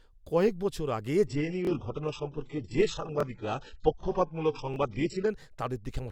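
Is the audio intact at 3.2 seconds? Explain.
No. From 1.27 to 5.27 s an adaptive stream at a lower bitrate takes over abruptly, with no gap. The connection's slowdown forced a far leaner encoding, likely a low-bitrate HE-AAC version, so nothing remains above 8 kHz. A spectrogram shows a sharp ceiling at 8 kHz across that stretch.

Within it, from 3.20 to 3.23 s, a repeated buffer plays: the device replayed the last 23 ms block once when fresh audio arrived late, which fits a 1024-sample buffer. It sounds like a brief buzz or click, drops about 20 ms of audio, and shows in the waveform as an identical segment twice with hard joins.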